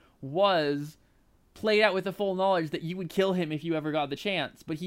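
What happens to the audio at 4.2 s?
Just after "kill him if you", at 4.16 s, damaged data in the compressed stream produces a brief glitch lasting under 20 ms. The decoder misreads the corrupted frame and loses sync until it finds a clean frame header. It comes across as a short chirp, squawk, click or hole.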